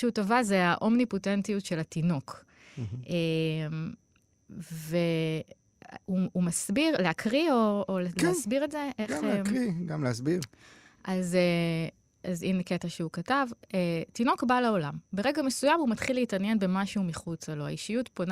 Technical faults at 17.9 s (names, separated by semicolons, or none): none